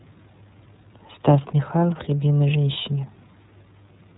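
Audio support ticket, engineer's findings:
iLBC codec damage across the whole clip, plainly audible. Nothing above 3.9 kHz. Rough, synthetic speech texture, which fits independently coded 30 ms frames at roughly 13 kbps.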